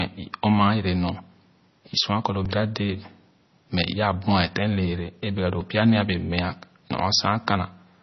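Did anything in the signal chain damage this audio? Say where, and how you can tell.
Yes. At the codec stage, the whole 8-second clip has heavy damage that most likely comes from a low-bitrate MP3 encode, around 24 kbps. Nothing is present above 6 kHz, and the speech sounds dull, watery and swirly as weak frequency lines drop in and out between frames.

In the driver or buffer stage, there is a repeated buffer. When audio arrived late, the device replayed its last block, which fits a 64-sample buffer of about 1.33 ms. At 2.45 s, just after "kɔ lo", that block sounds three extra times and makes a brief buzzy click. At 5.61 s, between "lɛɛlɛ a bɛga doo" and "pya nee a", it repeats once and leaves a single click.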